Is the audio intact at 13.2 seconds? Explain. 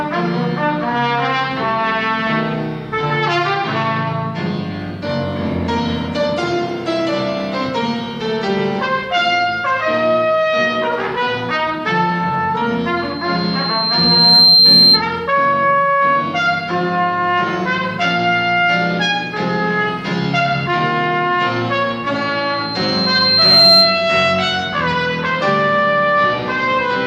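No. At 13.2 seconds a loudspeaker feedback squeal is under way. It runs from 12.96 to 15.06 s. A microphone is picking up the loudspeaker it feeds, and at 4.2 kHz the loop gain has passed one. That frequency reinforces itself on each trip around the loop. It is heard as a thin, piercing tone that swells over about a second and a half. It ends up roughly 10 dB louder than the rest of the sound.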